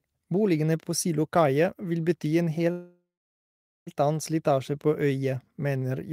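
At 2.71 s, right after "vil bety en", the speech stalls into a call audio freeze until 3.89 s: a brief fading buzz, then about 0.82 s of silence. The likely cause is delayed packets draining the jitter buffer. Unlike a dropout, speech resumes exactly where it stopped, so nothing is lost.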